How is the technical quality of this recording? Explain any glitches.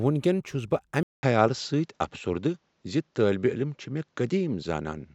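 The recording has one fault: at 1.03 s the sound drops out for about 200 ms and comes back duller, with nothing above 7.6 kHz and a faint new noise floor roughly 50 dB down. The loudness stays about the same. This is likely an input switched to a poorer device, whose narrower band and own background noise persist to the end.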